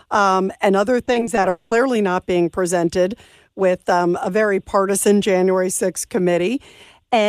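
From 1.05 to 1.45 s there's repeated packet loss (robotic sound): short holes, none over about 20 ms, get patched by stretching the last sound, so it turns choppy. Then from 1.49 to 1.73 s about 220 ms is replaced by a fading buzz of continued sound, likely a long network dropout, and the missing audio never returns.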